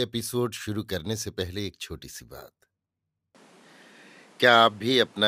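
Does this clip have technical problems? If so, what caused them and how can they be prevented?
Yes. At 3.35 s the speech turns duller, with nothing above 13 kHz, a level shift of roughly 5 dB and new background noise, likely from the input switching to a poorer device. Locking the recording input to a single microphone prevents this.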